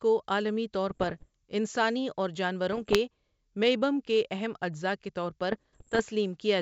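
Bit errors on an ADPCM link hit the speech at 0.91 to 1.26 s, 2.73 to 2.97 s and 5.52 to 6.01 s, the later two at a heavier rate of about 0.7 percent against about 0.4 percent. Each flipped bit throws the decoder's step size and predictor off, so errors ring on as pops and rough bursts with brief level jumps. A spectrogram shows broadband vertical streaks, and the waveform shows jagged spikes and uneven amplitude, over the G.722 wideband coding's faint upper-band hiss.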